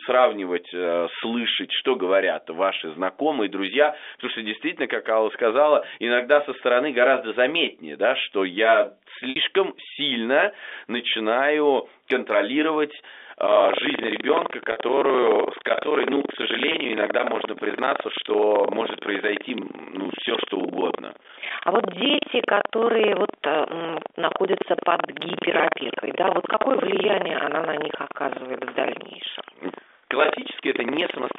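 At 9.30–9.36 s, between "заметнее да что я" and "сильно начинаю контролировать", the sound briefly holds on a buzzy, repeated note. This is packet loss with pitch repetition: the receiver looped the last pitch period to fill a 60 ms gap. From 13.44 s to the end, a steady robotic rattle at about 23.4 Hz rides on the signal. This is buffer tearing, where the writer and reader of the ring buffer cross inside every period, so about a fifth of each buffer replays audio from roughly a tenth of a second earlier. That rate fits a 2048-sample buffer. The same held, buzzy repetition returns at 14.72–14.76 s, bridging 40 ms, and at 16.72–16.74 s, bridging 20 ms. All of this comes through the narrow 300 Hz to 3.6 kHz band of G.711 A-law telephone coding.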